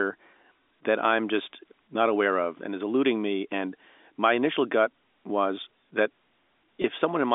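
Speech carried over G.711 telephone coding, band-limited to roughly 250 Hz to 3.6 kHz, has one brief dropout from 6.82 to 6.84 s, near the end. About 20 ms of audio is missing, which fits a single lost packet. The receiver bridges it with packet loss concealment by pitch repetition, looping the last pitch period so the gap sounds like a short, slightly buzzy hold. On a waveform, identical repeated cycles show there. A spectrogram shows frozen, evenly spaced harmonics before normal speech resumes.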